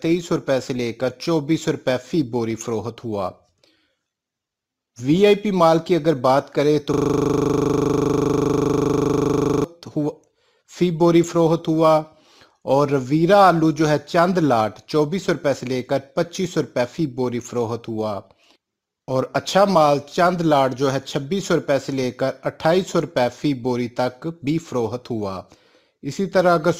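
At 6.94 s the audio locks into a system hang loop. It lasts until 9.64 s. One 40 ms slice of sound repeats exactly, dozens of times over. The computer or its driver stalled. Meanwhile the sound hardware kept replaying the same ring buffer. The repeat rate is 25 Hz. That is fast enough to fuse into a steady, rough buzz rather than a distinct stutter. Normal playback resumes abruptly at 9.64 s.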